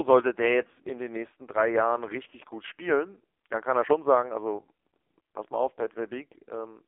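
Speech, run through an AMR narrowband mobile codec for its whole length, and a hard-squeezed one at that. The sound sits in a phone-line band of roughly 300 Hz to 3.5 kHz, with nothing at all above about 3.6 kHz, so sibilants go dull and the low end is thin. The codec damage is heavy: the voice comes out buzzy and synthetic, which fits one of AMR-NB's lowest modes, around 5.15 kbps, where the vocal-tract model gets very few pulses per 5 ms slice to work with.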